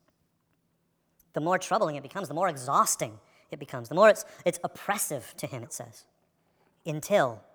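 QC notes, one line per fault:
Throughout, wrong sample rate: the samples are being clocked out faster than they were captured, with no rate conversion in between. The 1.38x speed-up points to material recorded at 32 kHz and played at 44.1 kHz. Because timing and pitch are both tied to the playback clock, the speech runs 1.38 times too fast and sits about 5.5 semitones high, so the voice comes across hurried and high.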